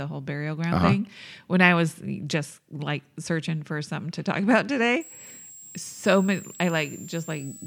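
From 5.01 s to the end at 7.66 s, a switching supply whistle sits about 20 dB under the speech, a thin tone wandering between 7.2 and 7.9 kHz from a power supply switching audibly.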